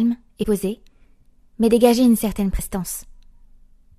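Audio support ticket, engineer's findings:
Compressed frames skipped, 0.42–0.44 s: sound jumps ahead roughly 70 ms, about three frames' worth. Decoder dropping missing or rejected frames.

Same again at 2.58 s: shorter jump, around 50 ms, roughly two frames. Skip sizes fit a frame length near 23 ms, so it's likely a damaged file or stream rather than playback.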